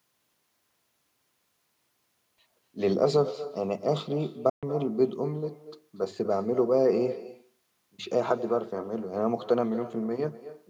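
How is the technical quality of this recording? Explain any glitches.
The technical quality suffers from two faults: a persistent echo under the whole speech clip, and one brief gap in the middle.

Echo with no canceller runs throughout. Every phrase is trailed by a quieter, thinner copy arriving roughly a fifth of a second later, about 14 dB below the direct speech. The far end is playing the call through a loudspeaker, and its microphone recaptures that sound and sends it back over the network. Nothing in the chain subtracts the returning signal, so it rides along with the original.

A Bluetooth dropout occurs from 4.49 to 4.63 s. The audio cuts to silence for about 128 ms, then resumes further along, as though it kept playing during the hole. The likely cause is audio packets failing to reach the headphones in time. The missing stretch fits roughly six dropped packets. The receiver outputs nothing until good packets arrive again, which accounts for the gap and the skipped material.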